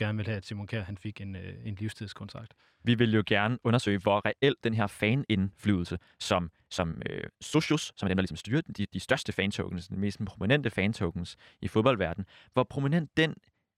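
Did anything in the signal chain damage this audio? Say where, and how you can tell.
Yes. Right after "vil jo", from 3.36 s to 9.54 s, the speech suddenly rushes at about 1.49 times normal pace while the pitch holds steady. That's a time-stretched section, likely from software squeezing the audio to fit a length by dropping short pieces.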